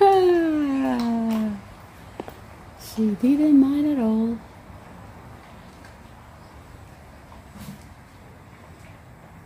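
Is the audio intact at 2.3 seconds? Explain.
Yes, at 2.3 seconds the audio is intact, with no dropout, click, distortion or other fault at that moment.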